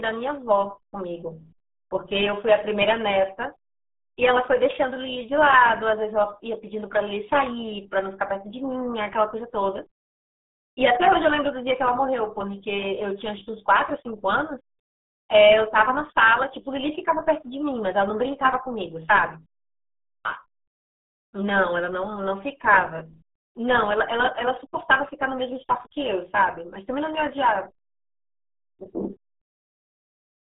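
From start to finish the speech carries RealAudio 14.4 codec damage: no content above 3.8 kHz, a 250 Hz to 3.6 kHz band, and heavy gargling consistent with roughly 8 kbit/s coding.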